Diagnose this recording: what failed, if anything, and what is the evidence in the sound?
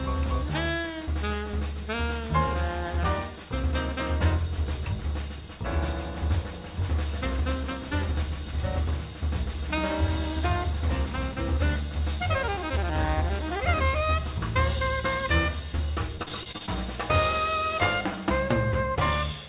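Network stage: repeated packet loss (robotic sound) from 15.76 to 16.70 s. Nine short gaps, the longest 38 ms, are filled by extending prior sound. The result is choppy and robotic.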